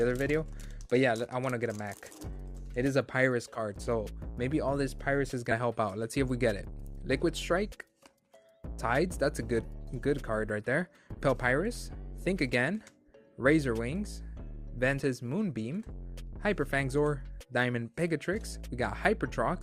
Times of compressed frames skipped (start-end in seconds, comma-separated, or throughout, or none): 3.55-3.60, 5.51-5.55, 11.17-11.21, 14.99-15.02